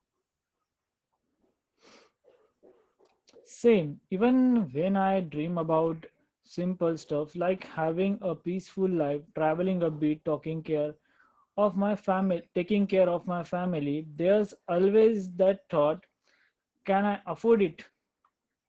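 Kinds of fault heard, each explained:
Opus voice compression: throughout, the speech passes through Opus's SILK linear-prediction coder in wideband mode, heavily damaged. Coarse excitation coding in 20 ms frames leaves it muffled, hoarse and slightly robotic, fitting a rate near 10 kbps. Nothing remains above 15.7 kHz.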